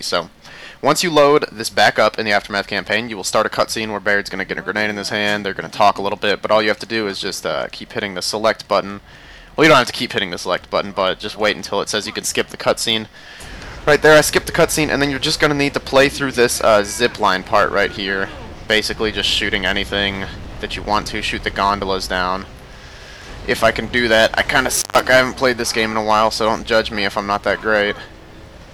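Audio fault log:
24.76–25.01 s, intermittent contact: a loose connection opens for about 140 ms, so the sound drops out with crackles at both edges and faint hiss during the gap. The waveform shows sharp spikes bracketing a near-flat stretch; the spectrogram shows broadband vertical streaks around a dark band.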